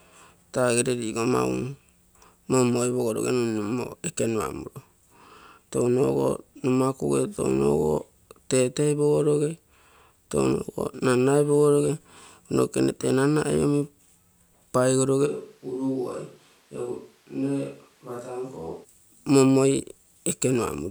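A speech recording in which, from 15.28 s to 18.83 s, the sound abruptly turns roomy and hollow, thins out in the low end, drops by about 10 dB, and carries a higher background noise, roughly 30 dB below the speech. At 18.83 s it snaps back just as suddenly. This is a switch to a distant microphone, likely from the close microphone's signal dropping out so that a farther pickup such as a camera microphone fills the gap.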